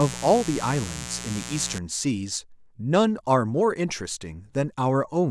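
Mains buzz runs from 0 to 1.78 s, a steady, raspy buzz sitting not far below the speech. Sharp switching spikes from a dimmer, rectifier or poorly shielded line entered the signal twice per 60 Hz cycle, spreading harmonics up into the kilohertz range.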